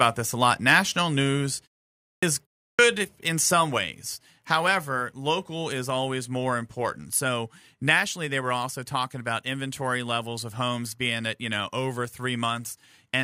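Speech with a harsh, crackling edge from 0.69 to 0.77 s, just after "this a lot", where the peaks are squared off about 3 dB past the converter's limit on a small fraction of samples. This is microphone overload, likely an input level set too high for the converter. Shortly after, at 1.02 s, the voice and background drop by about 2 dB in one step, and again by about 3 dB at 3.78 s, right after "in some". This is the microphone volume stepped down, likely the call software cutting the device's input gain after finding the microphone too loud or clipping. Between these, two phrases begin abruptly with their opening sounds missing: 2.15 to 2.23 s loses about 75 ms after a 0.56 s pause, and 2.71 to 2.79 s, just before "in some", loses about 79 ms after a 0.33 s pause. This is a clipped start after a pause, because the output device sleeps during silence and needs that time to wake before it passes sound again.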